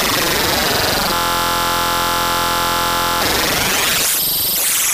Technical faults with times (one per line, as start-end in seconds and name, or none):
1.14-3.22 system hang loop